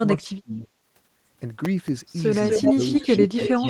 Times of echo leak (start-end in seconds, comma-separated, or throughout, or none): 2.42-3.69